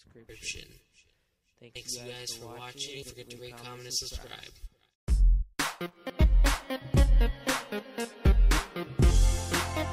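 At 3.02 s the audio jumps forward by roughly 0.4 s. Compressed frames were skipped, either missing from the stream or rejected by the decoder as damaged, so that stretch is never played. A second, shorter jump at 6.10 s drops around 0.15 s. Both skips are consistent with whole frames of about 32 ms going missing.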